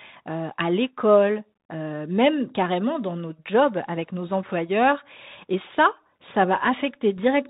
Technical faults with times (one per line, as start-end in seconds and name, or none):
0.00-7.49 Bluetooth CVSD headset codec